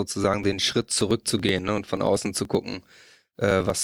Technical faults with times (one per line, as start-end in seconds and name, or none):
0.15-3.80 periodic USB or driver dropouts